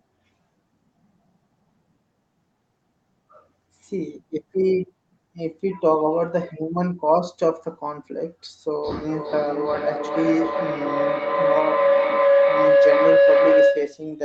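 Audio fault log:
8.76–14.1 s, feedback howl: a steady tone near 500 Hz builds up that swells in pulses about every 0.4 s and peaks around 6 dB louder than the voice, continuing to the end. Two devices sharing the call in one room formed a loop from loudspeaker back into microphone with gain above unity, so each pass came back louder, narrowing to the pitch the loop favoured and pulsing at its round-trip delay.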